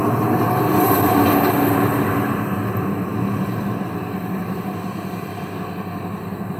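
Nothing stood out on listening to this recording of sounds.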